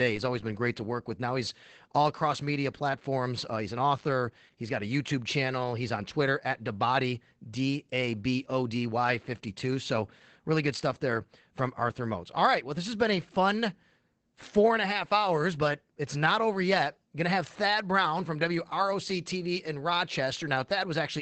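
Speech carrying Opus voice compression throughout: plainly muffled, hoarse and slightly robotic, its spectrogram cutting off flat at 8 kHz with smeared harmonics, which fits SILK at roughly 12 kbps.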